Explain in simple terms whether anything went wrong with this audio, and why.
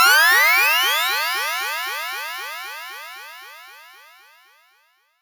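Throughout the clip, there is imaging from sample-and-hold upsampling. The audio was converted from 16 kHz to 48 kHz by repeating each sample, with no smoothing. This adds a mirrored copy between 8 and 16 kHz. It sounds like a bright, metallic fizz following the sound.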